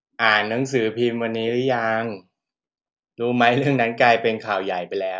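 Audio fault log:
Nothing to log here; the speech comes across without any technical problem worth noting.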